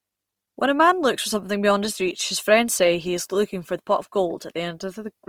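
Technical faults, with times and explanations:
Throughout, Opus compression: the speech turns grainy and rough, not swirly, likely from a low-bitrate CELT-mode encode that fills starved bands with folded spectrum or noise.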